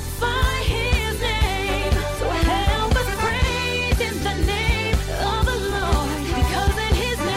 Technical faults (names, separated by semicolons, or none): none